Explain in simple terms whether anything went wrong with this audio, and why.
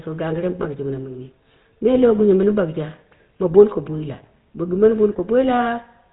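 Throughout the recording, the speech has the rough, buzzy, gravelly texture of the GSM full-rate codec, the coding used by early mobile phones. It rebuilds the voice from a simple model driven by a coarse pulse pattern and cuts everything above 4 kHz. That makes it sound dull as well as grainy. Ordinary phone-band filtering would only sound muffled. This codec also adds a plainly audible buzz on top.

At 0.62 to 0.66 s, just after "to gagire mɨ", there is a short case of lost GSM frames. The decoder filled the missing piece by reusing the last good sound settings, so the speech briefly freezes into a metallic ring instead of going on normally. The gap is very short and fits a single lost frame. A simple dropout would leave silence or a click, not this held ringing tone.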